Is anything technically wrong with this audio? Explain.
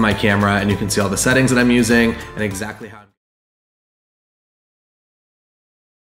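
No, nothing's technically wrong here; the only thing of note is a smooth fade-out that begins at around 2 s and reaches silence by 3.19 s, eased down gradually the way an editor would do it, with no click or hard edge.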